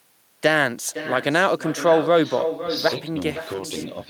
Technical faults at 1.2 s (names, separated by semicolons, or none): echo with no canceller